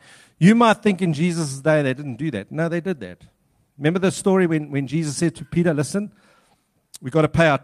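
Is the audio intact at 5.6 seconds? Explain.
Yes, the speech is intact at 5.6 seconds, with no audible fault at that moment.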